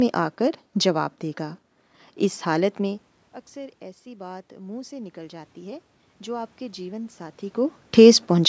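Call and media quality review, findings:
Automatic gain rising, 3.53–7.24 s. Input drops about 20 dB after talker moves near 3 s; call microphone AGC detects quiet input, ramps gain about 8 dB over 3.7 s. Voice and room noise swell together. Probable component: capture-side AGC.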